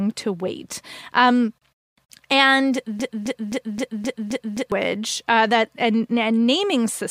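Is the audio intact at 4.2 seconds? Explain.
No. From 3.00 to 4.72 s a broken-record loop holds the speech: one 262 ms fragment repeats exactly, seven times back to back, until "uh that a". This is likely a stalled player or stream resending its last buffer. Unlike an echo, the repeats never decay, and the speech that belonged there is lost.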